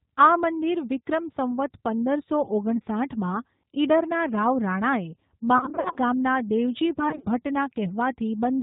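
Throughout, the speech carries G.729 codec damage, plainly audible at 8 kbit/s. Rebuilding the voice from a vocal tract model and a few pulses per subframe removes everything above 4 kHz and adds a rough, synthetic edge. That synthetic texture is what distinguishes it from a simple low-pass filter.

From 5.58 to 5.98 s, VoIP packet loss concealed by the speech codec stretches the voice into a buzzy tone or coloured noise that fades. About 240 ms went missing, scattered over 380 ms, with the longest gap 50 ms. A similar burst follows from 7.09 to 7.26 s, about 80 ms lost over 140 ms. These bursts are smeared, decaying sound rather than silent dropouts or clicks, and the voice stays weak briefly afterwards.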